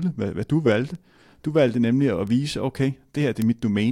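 Bit error spikes tick at 0.95 s after "hvad hvad du valgte", 2.27 s after "valgte nemlig at", and 3.42 s after "nemlig at vise okay", peaking at about -30, -24 and -6 dBFS. Each is a flipped bit in one to three samples, so the value leaps and snaps back. Unlike a dropout, no sound goes missing; there is only a broadband tick unrelated to the speech.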